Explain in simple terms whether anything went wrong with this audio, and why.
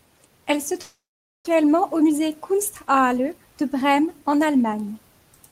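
Two things go wrong here, one right after the other.

From 0.81 s to 1.49 s there is a long network dropout, likely from audio that never arrived over the connection. The speech trails off into a fading buzz or hiss, then about half a second of near-silence, and it resumes with roughly 0.4 s of speech simply gone. A short glitch would leave a brief click or blur. Here the gap is long and the speech skips ahead.

From 1.56 s to 4.25 s comes a jitter buffer speed-up. After the gap, the receiver was holding extra audio and trimmed tiny slices, each a fraction of a syllable, again and again, removing about a fifth of a second in total. The speech runs about 8% faster and sounds rushed, but the pitch stays the same. That separates it from audio simply played too fast, which would sound higher, like a chipmunk.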